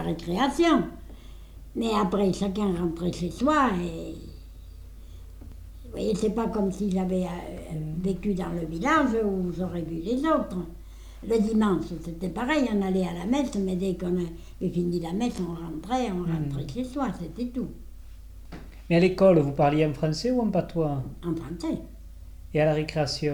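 Two brief stutters occur in the audio, at 5.52 s and 15.53 s, caused by overlapping chunks: the audio is handled in 10 s blocks, and each block restarts 12 ms before the previous one ended, so that sliver plays twice at each join, producing a click.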